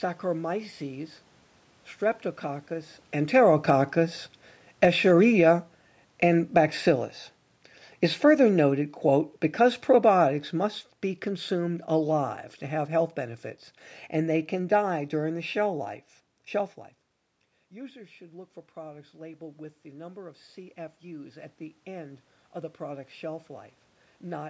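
From 3.15 to 6.86 s and again from 8.18 to 15.87 s, automatic gain falling pulls the level down by about 6 dB and then about 8 dB. Having judged the input too loud, the control eases the gain off gradually, so the speech and room background sink together. From 17.72 to 24.45 s, after the talker moves away around 16.5 s and the input drops by about 17 dB, automatic gain rising lifts the gain by about 10 dB, and voice and background swell back up together over several seconds.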